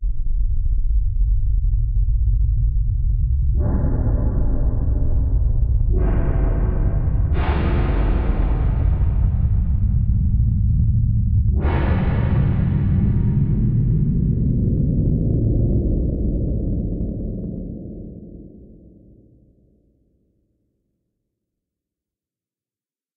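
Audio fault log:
No audible faults logged anywhere in the recording.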